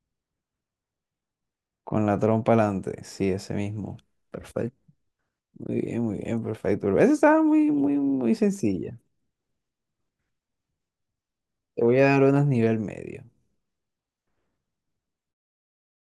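No technical faults can be heard anywhere in this speech.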